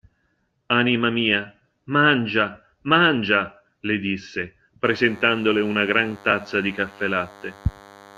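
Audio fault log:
4.85–8.17 s, DECT cordless phone buzz: Just after "le disse", a thin, steady buzz starts at a 100 Hz burst rate and stays to the end, roughly 25 dB below the speech. Radio bursts every 10 ms are being rectified in the audio circuit. A spectrogram shows evenly spaced horizontal harmonic lines, and the waveform shows a regular spiky ripple.
6.30–6.33 s, frames out of order: Within the buzz, a brief garbled flutter lasts about 24 ms. Two adjacent halves of this stretch, 4 frames each in blocks of about 10.7 ms, play in swapped order; nothing is dropped, so no time is lost. A spectrogram shows vertical discontinuities at the three joins.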